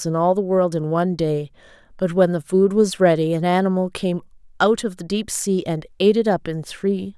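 No technical faults are audible.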